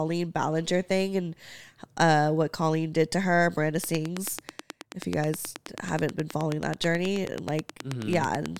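From 3.84 s to the end of the speech at 8.58 s, a steady ticking rides over everything, carried through the pauses as well. It is a train of clicks, around fifty near-identical pulses at an even 9.3 per second, each standing well above the speech level. The regular pace and constant shape point to something repeatedly injecting a pulse into the signal path, likely interference from nearby equipment or a faulty connection or power supply.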